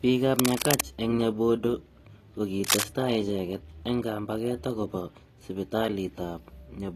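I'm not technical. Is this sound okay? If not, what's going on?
No. The speech carries AAC compression damage throughout, and it is plainly audible. It was likely squeezed into a small file. That strips detail: nothing above about 14 kHz remains. The voice can sound dull and smeared, with a warbly or fizzy edge on hiss sounds.

There is also cable scratch noise twice, from 0.36 to 0.81 s and from 2.64 to 2.85 s. You hear a rough, scratchy rustle, roughly as loud as the speech. A worn cable or plug being moved is the likely cause.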